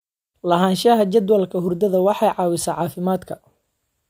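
No technical faults are audible.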